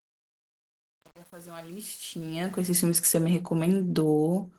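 From the start to 2.74 s the speech fades in, and the fade shows truncation distortion. The gain stage is keeping too few bits with no dither, which fits about 8-bit resolution. From 0.0 to 2.62 s, while the level is low, the waveform is reduced to coarse steps, so the rising sound is gritty instead of emerging cleanly.

Throughout the clip there is plainly audible Opus voice compression. The audio keeps content up to about 20.1 kHz, so the damage comes from coarse coding rather than band-limiting. The combination of a linear-prediction layer with a transform layer on top fits a bitrate around 16 kbps. With that few bits spread across full bandwidth, the speech sounds hoarse and somewhat robotic.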